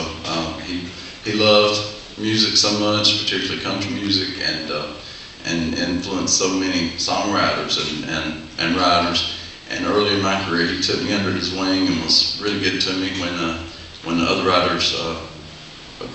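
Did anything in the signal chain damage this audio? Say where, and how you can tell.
No, the signal chain shows no damage at any stage from capture through playback.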